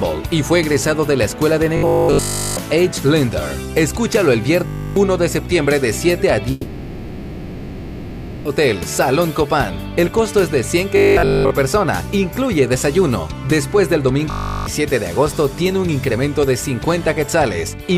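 From 1.77 to 2.57 s the sound turns rigid and metallic with a steady 50 Hz buzz. That's robotic sound from repeated short buffers, likely the last 20 ms looping while the real audio is skipped, and essentially the whole stretch is repeats. It happens again briefly from 4.66 to 4.96 s.

From 6.51 to 8.47 s there's a long network dropout, likely with nothing arriving for that stretch. The full 1.94 s of real audio is lost and covered by a fill rather than silence, and the sound picks up afterwards without the missing part.

The robotic 50 Hz buzz returns from 10.97 to 11.51 s and again from 14.30 to 14.66 s.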